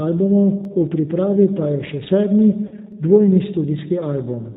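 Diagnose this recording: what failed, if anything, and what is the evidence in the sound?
The whole clip was carried through the G.729 codec, likely the reduced-complexity G.729A variant, at 8 kbit/s. Nothing above 4 kHz survives, so the speech sounds narrowband and boxy. The damage is plainly audible: the codec rebuilds each 10 ms frame from a vocal tract filter, a pitch predictor and a few pulses, which gives the speech a slightly rough, synthetic edge.

A repeated buffer stutter occurs at 0.65 s, just before "v pripravi pa je", and again at 2.92 s, just after "pa je še sedmi". At each point the playback path received no new audio in time and played the previous block once more. That block lasts about 5.3 ms, which fits a 256-sample buffer. Because the piece is so short, the hard joins at the start and end of the repeat sound like a click or a tiny buzz rather than an obvious echo.

VoIP packet loss concealed by the speech codec occurs from 2.67 to 2.75 s, right after "pa je še sedmi". 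About 40 ms of audio was lost, which points to two consecutive 20 ms packets. The decoder filled the gap by extrapolating from its last pitch and filter settings while lowering the gain. The result is a stretched, buzzy tone or coloured noise that fades out, and the speech stays weak and distorted for a short time after packets resume.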